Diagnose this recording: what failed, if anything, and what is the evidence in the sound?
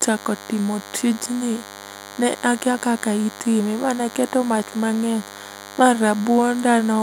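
The analogue stage has picked up DECT cordless phone buzz, present from start to finish under the speech. It is a thin, steady buzz at 100 Hz, roughly 20 dB below the speech. A DECT handset or base nearby transmits a short radio burst every 10 ms, and the audio circuit rectifies those bursts into audio. A spectrogram shows a comb of evenly spaced horizontal lines at 100 Hz and its harmonics. The waveform shows a regular 10 ms pulse train between words.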